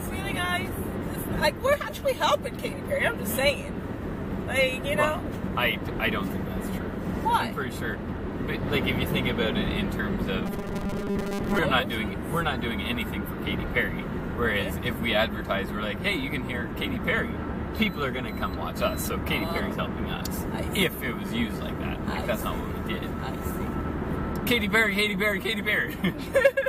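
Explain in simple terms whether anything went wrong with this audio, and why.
From 10.46 to 11.58 s the sound turns into a rigid, metallic buzz at 200 Hz, known as robotic sound from repeated short buffers. The likely cause is audio arriving too slowly, so the player repeated a 5 ms chunk for most of that stretch.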